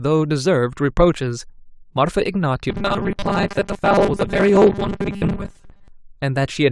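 From 2.70 s to 5.88 s the speech becomes a rigid, metallic 200 Hz buzz that still roughly tracks the syllables: robotic sound from repeated short buffers. The likely cause is audio arriving too slowly, with about half the signal replaced by looped 5 ms fragments.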